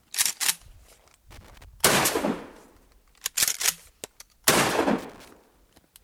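Loose connector crackle breaks in at 1.31 to 1.65 s and again at 4.98 to 5.28 s: a dodgy contact chopping the signal, giving ragged scratchy bursts.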